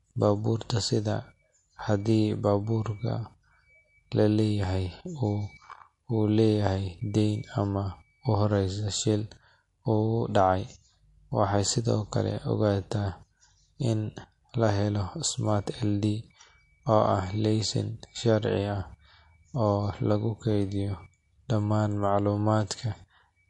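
A speech recording that sounds watery and swirly from start to finish, with nothing above 11.2 kHz and weak detail flickering in and out between frames. That points to MP3 compression, likely at a low bitrate, which fits about 48 kbps.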